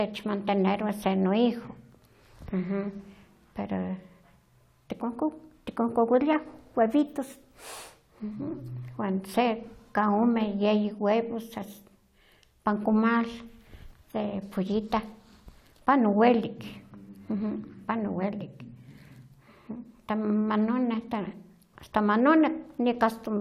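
No technical faults can be heard anywhere in the recording.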